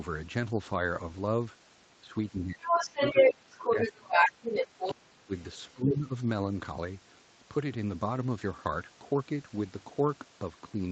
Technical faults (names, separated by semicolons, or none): speech suppressed in double talk; other side's voice leaking through